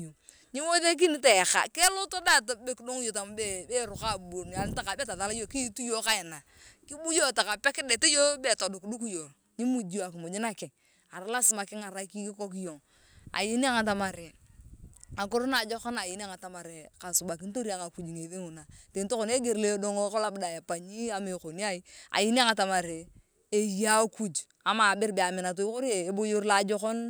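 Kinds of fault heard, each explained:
Block of digital silence: At 2.22 s the speech drops to silence for about 0.67 ms, consistent with a block of a few dozen samples left unfilled when the output buffer wasn't written in time. Because the cut in and out has no fade, and the gap is so short, it is heard as a tick or dip rather than a gap. A waveform shows a brief near-flat line with abrupt edges, and a spectrogram shows a thin vertical broadband stripe there.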